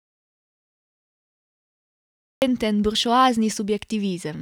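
The input path was likely lost, through a disconnected device, failed link or stray mute, while the recorder kept writing silence. This speech clip opens in an audio dropout to silence already under way, silence with no room tone until speech cuts in at 2.42 s.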